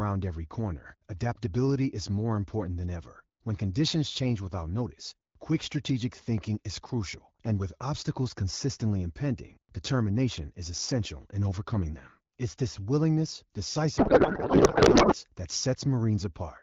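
Speech, coded with the AMR wideband (HD Voice) codec at a rate that sounds like the 12.65 kbit/s mode and carries only light codec colouring. It suffers a codec payload misread from 13.97 to 15.15 s, just after "this willingness": the receiver unpacks octet-aligned AMR frames as if they were bandwidth-efficient, so every parameter lands in the wrong field. For that stretch the speech gives way to garbled, warbling noise that barely tracks it, until the packing matches again.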